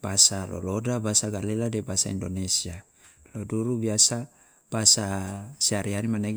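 Speech, with no technical fault audible anywhere in the recording.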